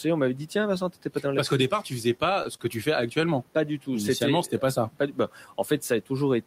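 Between 2.17 and 2.62 s, just after "qu'au départ tu faisais" and before "que tu fais", the speech shows repeated stalls (stutter). Packets arrived late, the jitter buffer ran dry four times, and the receiver stretched the last sound to bridge each wait, about 57 ms in all, the longest 26 ms. Unlike packet loss, nothing is dropped. The speech drags and hiccups rather than skipping, while the room noise, about 26 dB below the speech, continues underneath.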